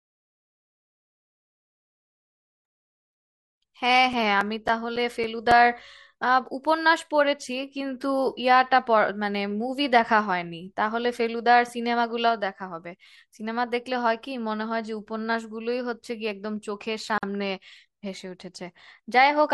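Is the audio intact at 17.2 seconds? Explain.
No. From 17.18 to 17.23 s the speech drops out for about 49 ms: a gap at a join of encoded pieces. Separately encoded segments were spliced untrimmed, so encoder start delay and final-frame padding leave a silence with smeared edges before the speech resumes where it stopped.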